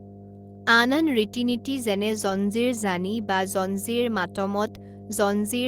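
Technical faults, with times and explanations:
Throughout: mains hum. A steady 50 Hz tone with a few low harmonics sits under the speech, about 15 dB below it, from a ground loop or nearby transformer. Unlike rumble or wind, it holds one fixed pitch and never varies.
2.09 to 2.35 s: lost packet rebuilt from error correction. About 140 ms of speech turns rougher and noisier, which fits several lost packets replaced by low-bitrate copies from the following ones. There is no gap or smeared repeat, which sets it apart from concealment.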